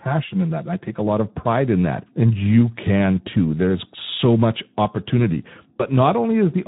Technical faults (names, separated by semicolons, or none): Speex codec; channel delay (comb filtering); VoIP packet loss concealed by the speech codec